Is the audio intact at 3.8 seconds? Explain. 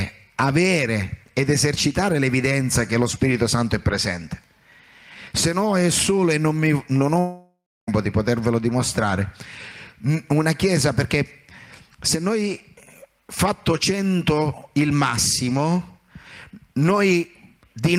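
Yes, at 3.8 seconds the audio is intact, with no dropout, glitch or other fault to be heard there.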